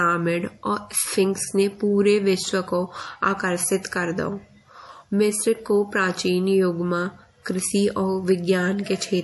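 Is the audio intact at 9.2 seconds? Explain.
No. At 9.2 seconds the speech carries MP3 compression damage, as it does throughout the clip. Nothing sounds above 11.5 kHz, so the treble is cut off flat. Weak frequency lines switch on and off between frames, giving a watery, swirly texture and metallic chirps on s sounds. Consonant attacks smear. The cause is likely a low-bitrate MP3 encode, and the damage fits a rate near 48 kbps.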